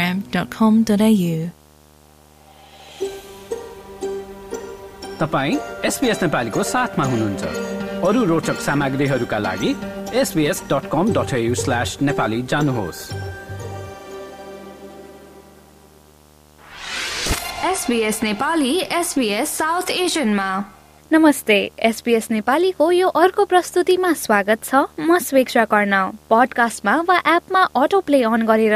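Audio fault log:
throughout: video or display buzz. A steady 75 Hz buzz with gritty hash riding above it sits beneath the sound, roughly 30 dB down. A screen or video cable is leaking into the audio path, so the buzz tracks the picture's 75 Hz field rate.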